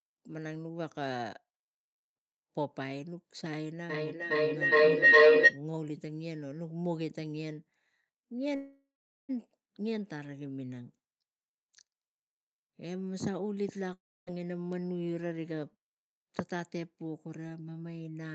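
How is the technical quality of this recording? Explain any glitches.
The recording has three clear glitches, and the sound is band-limited to about 8 kHz, as on a call.

From 3.9 to 5.63 s a rising tone around 500 Hz swells to about 17 dB above the speech, with the loop repeating roughly every 0.4 s. This is feedback howl: two devices in the same room share the call, so the sound loops from loudspeaker to microphone and gains level on each pass. The loop narrows to the pitch it favours, and the repeats follow the loop's round-trip delay.

From 8.55 to 9.31 s the speech stops and the last sound is stretched into a fading buzz that sinks into about 0.42 s of silence. Then the speech resumes exactly where it left off. This is a call audio freeze, likely caused by packets stalling in transit until the jitter buffer ran empty. The receiver filled 734 ms, nothing was lost, and everything afterwards plays that much later.

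From 13.93 to 14.29 s there is a similar fading buzz followed by about 0.28 s of silence. This time the speech returns further along, with about 0.38 s of it gone. This is a long network dropout, likely caused by audio that never arrived. The receiver concealed the gap for about a third of a second, then skipped ahead past the missing stretch rather than waiting.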